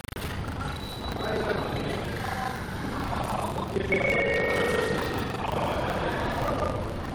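Buffer tearing runs through the whole clip. The writer and the hardware reader of the ring buffer have slipped and cross inside each period. Most of every buffer replays audio from around 150 ms earlier. The hard joins make a rattling 25 Hz buzz whenever sound is present.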